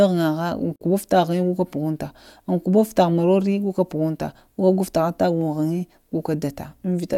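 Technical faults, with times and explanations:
0.76–0.81 s, gap at a join of encoded pieces: The speech suddenly cuts to silence for about 51 ms, with hard edges blurred by the codec, then resumes exactly where it stopped. Each separately encoded piece carries leading encoder delay and trailing frame padding, and because the pieces were spliced without trimming, that silence stays in. The pattern repeats every 6 s, matching the length of each encoded piece.
5.41 s, dropped samples: A single sharp, very brief click, visible as a thin vertical line across the spectrum. The likely cause is a handful of samples missing from the stream, well under a millisecond's worth. The waveform jumps straight from one value to a later one, and that step produces the click. Too little audio is lost for any sound to go missing.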